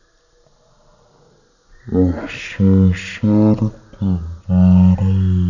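Throughout, the audio is played back at a wrong sample rate with no conversion, which fits 48 kHz speech read out at 16 kHz. Everything runs at one third speed, and pitch drops about 19 semitones, so the speech sounds deep and dragging.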